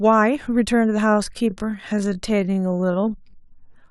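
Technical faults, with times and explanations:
1.0 to 3.9 s, time-stretched section: from 1.0 s to the end, the speech abruptly slows to about 0.62 times its earlier pace while the pitch stays where it was. The likely cause is software stretching this part to fill a longer length by repeating short overlapping pieces, which makes the speech drag. A plain slowdown, as from playing back at the wrong rate, would drop the pitch along with the pace.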